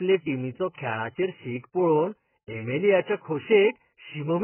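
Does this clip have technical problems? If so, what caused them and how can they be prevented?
Yes. The speech sounds dull and smeared throughout, with nothing above 3 kHz and a warbling, fizzy texture. The likely cause is heavy AAC compression at a very low bitrate, near 8 kbps. The coder drops high frequencies and starves the rest. Encoding at a higher bitrate prevents it.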